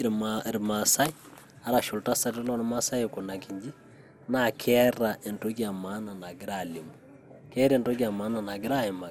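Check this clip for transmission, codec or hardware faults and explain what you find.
One codec fault runs through the whole speech clip: generation loss. The audio sounds swirly, smeared and hollow, with blurred attacks and nothing above 17.1 kHz. This likely comes from around four passes through an MP2 encoder at something like 96 kbit/s, each on a shifted frame grid. A single encode at that rate would sound cleaner.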